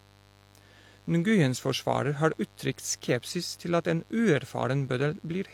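From start to finish, switching spikes from the mains, at 50 Hz and twice per cycle, leak into the signal path, producing mains buzz whose harmonics stretch into the kilohertz range. It sits roughly 30 dB under the speech as a constant, raspy buzz.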